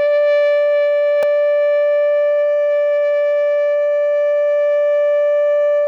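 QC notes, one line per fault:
1.23 s, block of digital silence: the music drops to silence for about 2.9 ms and returns with no fade, heard as a tick or dip. The length fits a 128-sample buffer left unfilled. The waveform shows a flat gap; the spectrogram, a thin vertical broadband stripe.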